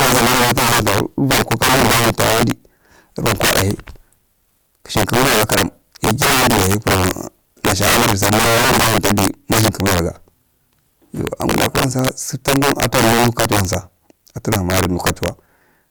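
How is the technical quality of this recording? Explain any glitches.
Technical quality is poor. Integer overflow runs through the whole speech recording. The signal is driven about 14 dB past the integer limit. Those peaks wrap to the opposite sign instead of being limited. Roughly 7 percent of samples are affected, producing violent cracks on louder syllables, much harsher than clipping.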